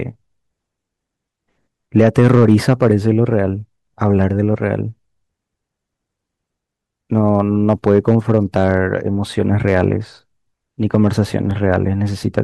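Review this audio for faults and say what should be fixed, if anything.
Hard clipping at 1.97–3.10 s, 4.05–4.24 s, 7.17–8.77 s, 9.68–9.84 s and 10.95–11.76 s: the speech drives a stage about 1 to 5 dB past its limit, flattening peaks, worst in the first stretch. Lower the gain ahead of that stage to leave headroom.

Block of digital silence at 3.87 s and 11.51 s: the output drops to zero for about 2.7 ms, which fits a 128-sample buffer going unfilled, and each is heard as a tick. Give the audio thread more processing margin or a larger buffer.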